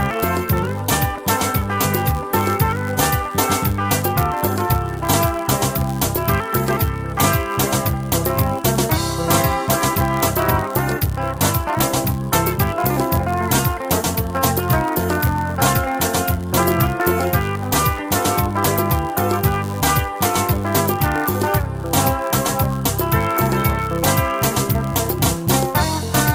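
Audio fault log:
throughout, block size mismatch (padded): each block is written slightly short and zero-filled, so a tiny gap recurs 99.6 times a second, buzzing at that rate while the audio runs 0.4% slow with its timbre unchanged. The waveform shows evenly spaced dips; the spectrogram shows regular vertical lines.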